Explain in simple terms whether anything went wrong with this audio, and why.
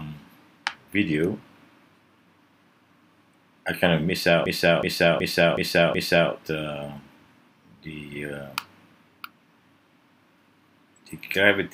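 Something did go wrong, from about 4.46 s to 6.32 s. This is a system hang loop. The computer briefly froze, but the sound hardware kept replaying the same stored chunk. You hear one short piece, about 0.37 s long, repeat five times in a row. That is roughly 2.7 repeats per second, so it sounds like a choppy stutter. That chunk length fits a 16384-sample buffer. Afterwards the sound picks up again with little or nothing missing.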